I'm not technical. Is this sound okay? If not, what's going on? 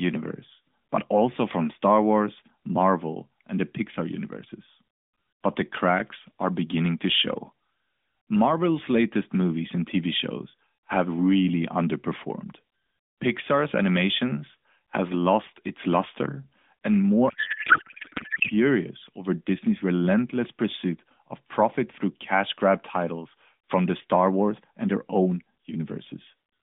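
No. From 17.30 to 18.50 s, just after "lost its luster and", the speech turns into garbled, warbling noise. This is a codec payload misread. The sending side packed the phone codec's bits one way, and the receiving side unpacked them another way. The rest comes through the AMR narrowband mobile codec, with its usual slightly muffled phone sound.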